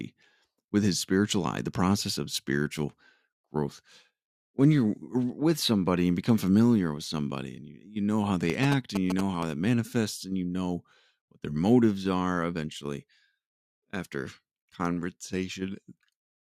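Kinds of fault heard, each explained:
GSM signalling bursts: a nearby 2G phone's radio bursts are rectified by the audio circuit, heard after "know how" from 8.50 to 9.43 s as a galloping dit-dit-dit of short 217 Hz buzzes, fairly loud against the speech. Unlike mains hum, it stutters in groups rather than droning steadily.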